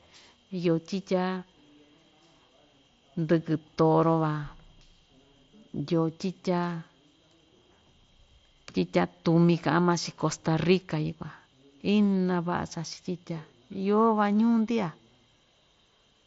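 Nothing stood out as a technical fault on listening to this speech clip.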